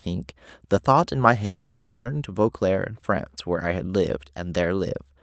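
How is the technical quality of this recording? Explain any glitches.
The recording has one clear glitch, a gap of a little over half a second. From 1.45 to 2.08 s the sound gives way to a synthetic buzzy continuation that stretches the last sound and fades. This is likely a long network dropout: packets stopped arriving, and the receiver filled about 0.6 s with concealment before real audio resumed, with that stretch of speech lost. Throughout, the call codec limits the band to about 8 kHz, consistent with Opus at a modest bitrate.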